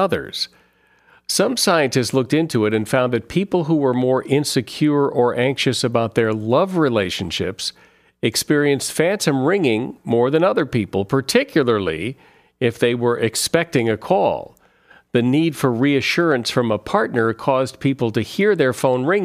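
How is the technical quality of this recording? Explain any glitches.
The technical quality of this recording is sound, with no glitches to explain.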